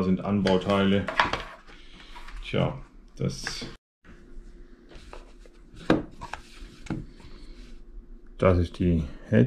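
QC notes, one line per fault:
6.85 s, compressed frames skipped: the audio jumps ahead about a tenth of a second, which fits roughly four 23.2 ms frames.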